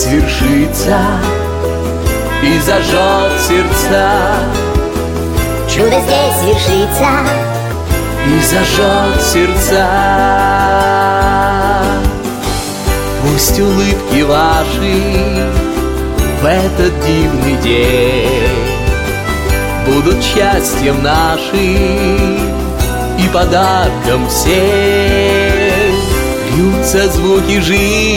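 From 5.79 to 7.73 s, a section at the wrong speed plays 1.4 times fast, pitch and pace rising together, about five semitones, likely mis-clocked.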